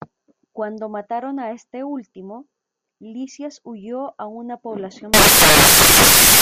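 At 5.14 s, right after "huyó a una", the speech turns into loud broadband noise. It lasts until the clip ends at 6.41 s. These are samples built from the wrong bytes. The reader assembles each sample with its bytes misaligned or in the wrong order. The quick-changing low bits end up as the most significant part of every value. The result is a harsh, broadband hiss.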